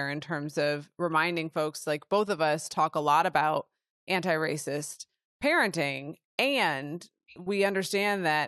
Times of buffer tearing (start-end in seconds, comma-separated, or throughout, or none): none